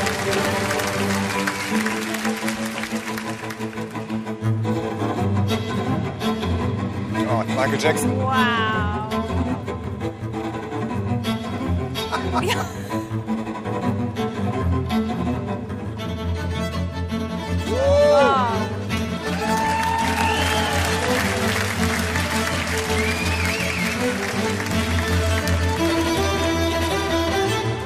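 No technical faults can be heard anywhere in the audio.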